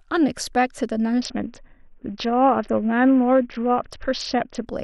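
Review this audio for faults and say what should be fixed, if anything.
There's a Bluetooth SBC bit pool drop from 1.21 s to 4.67 s. Right at 1.21 s the speech loses its top end and goes dull, with a gritty, grainy noise sitting under it until about 4.67 s. That fits the encoder cutting its bit pool from 31 down to about 6, roughly 55 kbps. With so few bits, the highest sub-bands get starved and everything else is quantised coarsely. To prevent it, reduce radio congestion near the link or use a codec or fixed bit pool setting that doesn't collapse under load.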